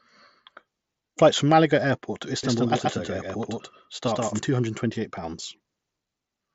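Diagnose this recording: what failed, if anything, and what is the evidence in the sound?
Doubled audio track, 2.43 to 4.39 s: a full-band copy of the speech trails the original by about 150 ms at roughly the same level, with no decay or room colour, and it starts and stops abruptly. This is likely a routing or edit stage capturing the signal twice.

Concealed Bluetooth headset packet loss at 4.06 s: a brief gap of about 15 ms, which fits two lost frames on the headset link, is filled by repeating the best-matching recent waveform on the mSBC path.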